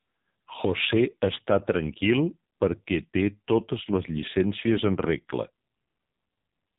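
Throughout, the speech carries heavy AMR narrowband mobile codec damage: nothing above about 3.8 kHz survives, and the vocal-tract model leaves a buzzy, synthetic tone that fits a low mode near 5.9 kbps. A spectrogram shows a hard ceiling with smeared, blocky harmonics beneath.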